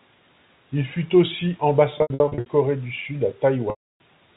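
From 1.98 to 2.46 s, just after "fut aussi", and again from 3.70 to 4.00 s, packet loss with pitch repetition: lost stretches are bridged by looping the last pitch period, giving a held, buzzy tone where the gaps are short, while the longer loss at 3.70 s fades into silence before the speech returns with a short cross-fade.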